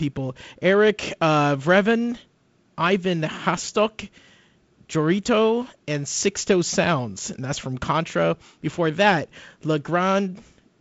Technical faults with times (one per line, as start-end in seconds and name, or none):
none